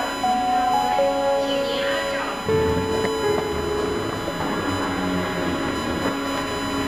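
Current drawn by the USB bus in regular 1 ms frames is leaking into the audio path through the power or ground, producing USB whine from start to finish. It sits as a fixed-pitch tone at 1 kHz, strongest right at that frequency, and it is loud, roughly 10 dB below the wanted sound, so it stays plainly audible behind everything as a thin, piercing whine that never changes pitch.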